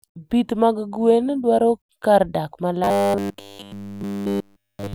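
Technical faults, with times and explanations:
2.84–4.94 s, robotic sound from repeated short buffers: right after "gwen dwaro kar dak" the speech becomes a rigid metallic buzz fixed at 100 Hz, likely from the last 10 ms of audio being repeated over and over for the entire stretch. Unlike a pitch shift, the buzz stays locked while the speech only loosely follows.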